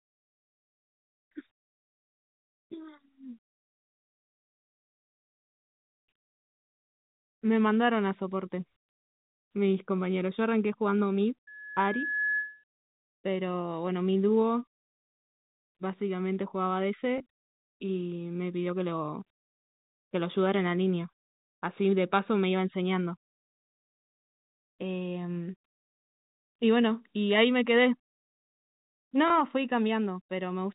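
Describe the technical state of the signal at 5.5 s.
Nothing goes wrong at 5.5 s: the speech there comes through intact, carried on G.711 telephone coding, which limits it to the band below 4 kHz with only a faint, level-following quantisation noise underneath.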